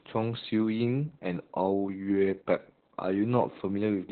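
Throughout, the speech sounds muffled, hoarse and robotic with nothing above 4.3 kHz, the mark of heavy, narrowband Opus voice compression, which fits about 8 kbps.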